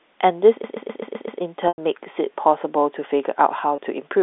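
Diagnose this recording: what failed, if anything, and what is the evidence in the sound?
A system hang loop at the driver or buffer stage: the host stalled while the playback hardware kept replaying one 128 ms stretch of its ring buffer, which fits a 2048-sample buffer. From 0.64 to 1.41 s the same fragment repeats six times at about 7.8 Hz, a machine-gun stutter.

Packet loss with pitch repetition, at the network stage: the receiver bridged missing packets by repeating the last pitch period. At 1.68 s a 100 ms gap stretches into a fading tone, near silence, then a cross-fade back into the speech. At 3.76 s a 20 ms loss leaves a brief buzzy hold.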